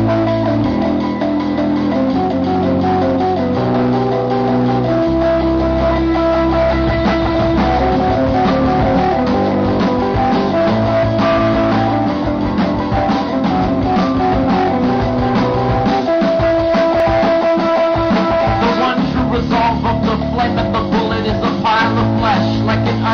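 At 2.28 to 2.34 s, 8.92 to 8.97 s and 17.0 s there is damaged data in a compressed stream: corrupted bytes make the decoder misread or reject frames, lose sync and hunt for the next frame header. Each event is a brief chirp, squawk, click or hole of 60 ms, 50 ms and under 20 ms. Unlike a plain dropout or clean splice, the disturbance comes from garbled decoding rather than just missing or cut audio.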